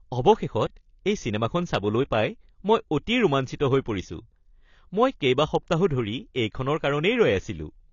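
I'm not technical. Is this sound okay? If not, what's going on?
No. The speech was likely squeezed hard by AAC compression, a space-saving format that discards detail. From start to finish nothing above 7 kHz survives, so it sounds dull and muffled, with a watery, fizzy edge on hissy sounds.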